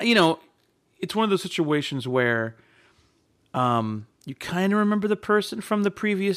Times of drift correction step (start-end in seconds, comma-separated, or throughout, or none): 1.11-2.09